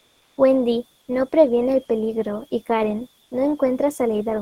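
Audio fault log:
0.00 to 0.37 s, comfort noise in place of the background: the sender appears to stop transmitting during the opening pause, most likely Opus discontinuous transmission, and the receiver fills the 373 ms gap with synthetic noise. The room background, sitting about 43 dB below the loudest sound, becomes a steady, featureless hiss at the same level.
3.23 to 3.31 s, comfort noise in place of the background: the same substitution covers an 80 ms pause, smoothing the background, about 42 dB down, into flat noise at an unchanged level.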